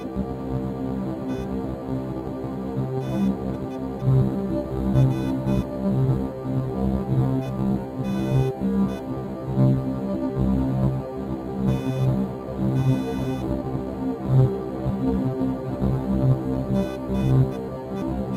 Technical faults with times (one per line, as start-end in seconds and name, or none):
0.00-18.36 computer activity noise
0.00-18.36 noise suppressor applied to music or sounds